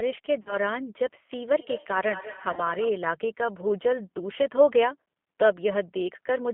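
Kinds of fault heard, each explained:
G.729 codec: An 8 kbit/s codec rebuilds the speech from a vocal tract model, so it sounds plainly rough and synthetic, with a narrow band of about 200 Hz to 3.4 kHz.
VoIP packet loss concealed by the speech codec: About 40 ms of audio was lost twice, which fits two packets each time. The decoder extrapolated, leaving fading, weakened speech from 0.42 to 0.56 s and from 2.53 to 2.61 s.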